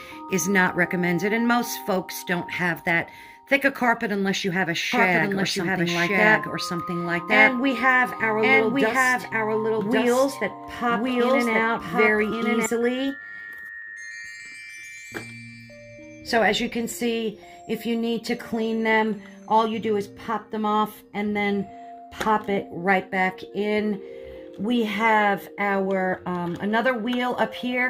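From 4.92 s to 12.66 s the audio is heard twice: a second, full-band copy trails the original by about one second, at roughly the same loudness, so everything seems to repeat on top of what follows. The copy carries no decay or room colour, and it cuts in and out abruptly at those times. This doubled audio track is likely caused by the signal being captured again through a slower path, or by an edit that left two copies out of step.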